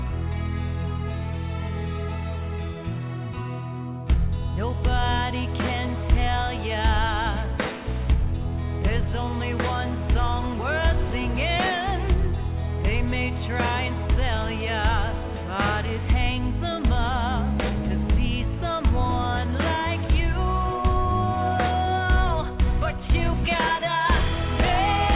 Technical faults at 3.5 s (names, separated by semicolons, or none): none